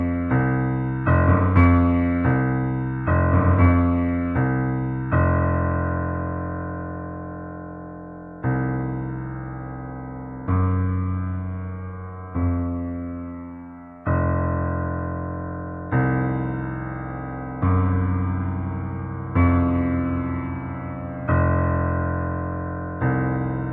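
No technical faults are audible anywhere in this recording of sounds.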